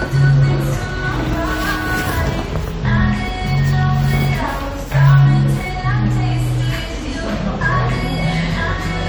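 No technical faults can be heard anywhere in the audio.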